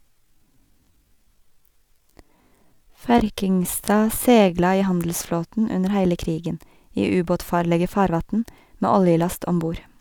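From the start to 4.52 s, just before "i handelsflåten under heile", a time-stretched section slows the speech to 0.66 times its pace, pitch unchanged, so it drags, likely from software length-fitting.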